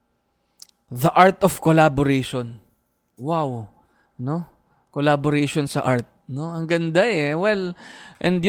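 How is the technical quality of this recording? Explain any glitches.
Nothing stood out on listening to this speech recording, and there are no glitches to explain.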